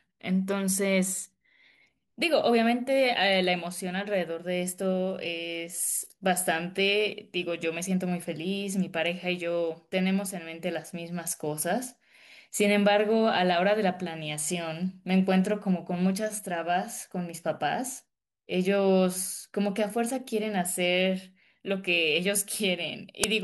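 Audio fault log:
23.24 s, file tags played as audio. A very short burst of very loud white noise hits near the end of the clip, with hard edges at both ends. The player has read part of the file's tag block as sound. That block holds an embedded cover picture, stored as compressed data. Compressed bytes look random, so treated as samples they come out as loud, flat static. It starts and stops abruptly because the block has fixed boundaries.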